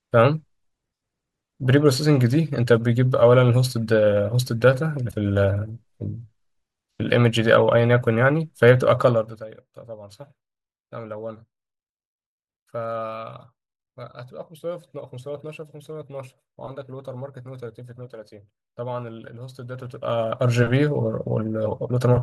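Damaged data in the compressed stream appears from 5.08 to 5.14 s. For about 60 ms the decoder meets frames it cannot read correctly, loses its place in the bitstream and hunts forward for the next valid frame header before picking the speech back up. In that gap the speech is briefly broken up.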